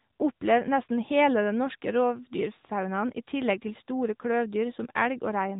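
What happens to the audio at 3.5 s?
At 3.5 s the speech is still passing through the AMR narrowband mobile codec, which runs for the whole clip. The codec samples at 8 kHz, so nothing above 3.8 kHz survives, and it rebuilds the voice from a vocal-tract model and sparse pulses, leaving a muffled, plainly buzzy, synthetic tone that fits a mid-rate mode near 10 kbps.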